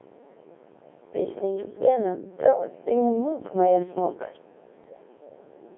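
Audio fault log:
Throughout: Codec 2 vocoder. The speech has the robotic, buzzy character of a low-rate vocoder. Heavy damage fits about 1.6 kbit/s, carrying only pitch, voicing, energy and spectral envelope, then rebuilt from sine waves. The original waveform is lost, and the band is held to roughly 250 Hz to 3.5 kHz.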